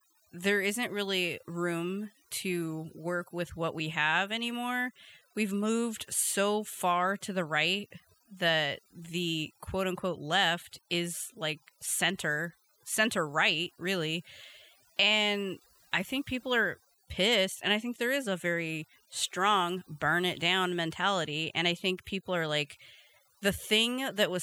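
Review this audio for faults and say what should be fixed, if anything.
Overdone noise removal runs throughout: bands near the noise estimate get cut, taking quiet speech detail with them and leaving twinkling specks, seen as scattered isolated spectrogram blobs. Prevent it by using gentler reduction strength with a proper noise profile.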